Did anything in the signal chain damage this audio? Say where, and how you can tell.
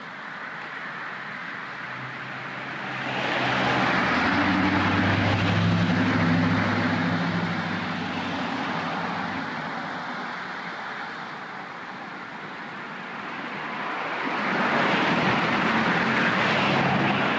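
Yes. Gain pumping runs through the whole clip. The gain ducks under each loud sound, with the level shifting by around 5 dB each time. Loud and quiet passages sit unnaturally close together, so the sound feels squashed. The likely cause is input gain set far too high, with a fast limiter or compressor in the capture or call processing stage clamping down on each peak. The top end stops at 8 kHz, which fits a G.722 call codec.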